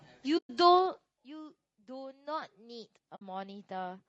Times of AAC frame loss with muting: 0.37-0.50, 3.15-3.22

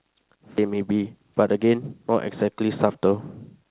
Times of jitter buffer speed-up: 1.42-1.79

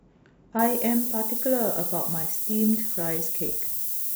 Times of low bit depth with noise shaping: 0.59-4.15

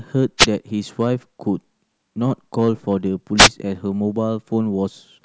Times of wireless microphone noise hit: 0.38-0.46, 3.37-3.49

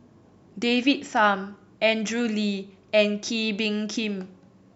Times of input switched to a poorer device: none

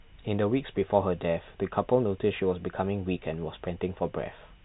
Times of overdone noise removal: none

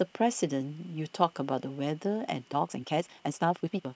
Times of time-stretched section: 2.46-3.95

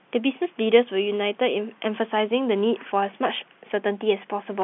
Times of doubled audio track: none

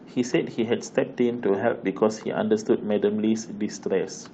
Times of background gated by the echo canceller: none

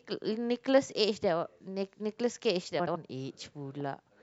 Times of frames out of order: 2.79-2.96

